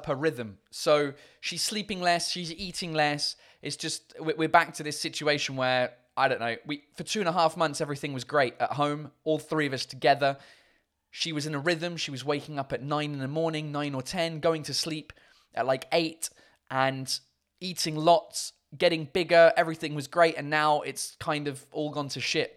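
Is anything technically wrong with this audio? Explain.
No, nothing technically wrong can be heard here.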